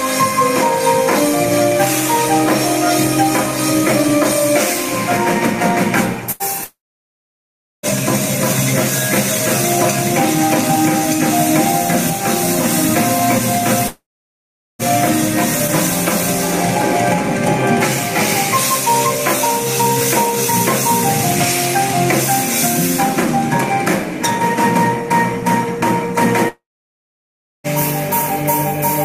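At 6.31 s the sound briefly freezes into a held sound that fades for about 84 ms, then jumps ahead to 6.43 s. This is a burst of packet loss. A short run of audio, about 80 ms, never arrived in time, so the receiver stretched the last fragment and faded it down before resuming further along, with that slice gone.

The same freeze-and-fade returns at 6.64 s, but this time it dies into roughly 1.07 s of silence before the audio picks up at 7.86 s, about 1.2 s later. It recurs from 13.87 to 14.82 s, with about 0.76 s of silence and about 0.92 s missing, and again from 26.48 to 27.67 s, with about 1.02 s of silence and about 1.16 s missing. Each is likely a long network dropout. The receiver's brief continuation of the last sound ran out, leaving nothing to play until packets flowed again, and the stretch in between is lost.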